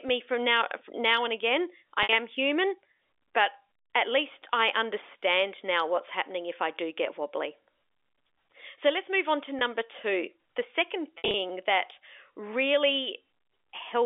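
Speech over a telephone line, with G.711 band limiting to about 300 Hz to 3.5 kHz. Packet loss with pitch repetition occurs at 2.03 to 2.09 s (60 ms), 9.59 to 9.61 s (20 ms) and 11.18 to 11.34 s (110 ms scattered, longest run 60 ms). The receiver loops the last pitch period, giving brief held, buzzy patches.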